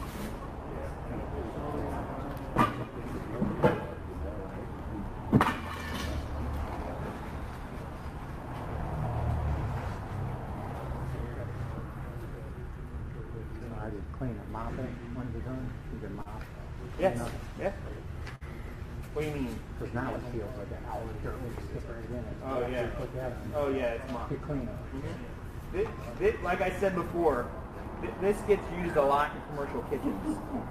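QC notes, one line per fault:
16.22–16.29 s and 18.36–18.44 s, short stall from a late packet: a packet arrived after its due time, the jitter buffer ran dry, and the receiver held the last sound in place, about 35 ms at the first point and 53 ms at the second, before picking up exactly where it had stopped. Nothing is skipped, but each instant is drawn out briefly, with a faint buzz or dip, and playback sits slightly later afterwards.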